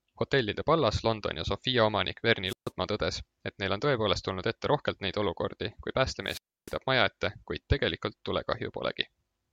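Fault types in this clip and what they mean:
Wireless microphone squelch dropout: the speech twice breaks into a short surge of hiss followed by a hole of near silence, then returns just before "tõdes et neil on" (2.46 to 2.71 s, about 140 ms muted) and before "maja ette kuid" (6.24 to 6.75 s, about 300 ms muted). The analogue FM radio link fades so far that the receiver's squelch shuts the output off until the signal recovers.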